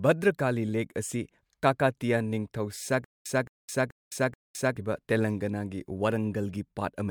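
From 3.04 to 4.77 s the speech hits a stutter with silent gaps: a 219 ms burst repeats four times, each followed by about 212 ms of dead silence, likely a stalled stream.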